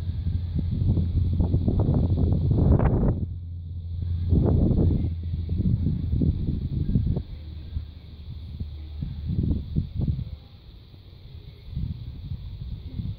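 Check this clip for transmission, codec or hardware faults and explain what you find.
No faults detected here.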